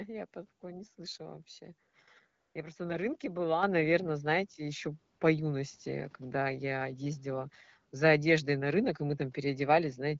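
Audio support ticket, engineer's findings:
Background goes smooth and steady, flat synthetic hiss replacing room sound at 1.89–1.93 s, 2.27–2.55 s and 5.15–5.19 s. AMR comfort noise: speech frames halted, receiver synthesising noise from coarse level/spectrum description.

Abrupt jump in level at 3.63 s, speech and background rising together by about 7 dB. Microphone volume stepped up: call software's auto-gain raised device input volume in one step.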